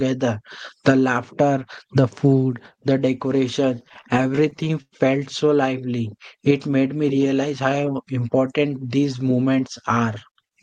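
From 3.75 to 4.94 s you get repeated stalls, a stutter: packets arrived late, the jitter buffer kept running dry, and the receiver stretched the last sound fifteen times, up to 103 ms, about a fifth of that span. Nothing's lost, but the speech drags and judders.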